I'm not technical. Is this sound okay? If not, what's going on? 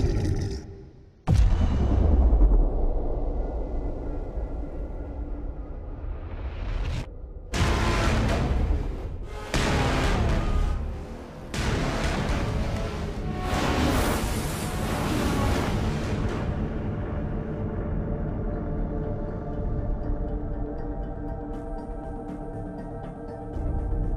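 Yes, nothing stood out as a problem when listening to this recording.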